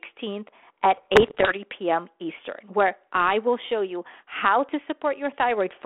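From 0.94 to 1.54 s, bit errors on an ADPCM link produce pops and rough bursts. Roughly one percent of bits flipped, corrupting the decoder's step size and predictor.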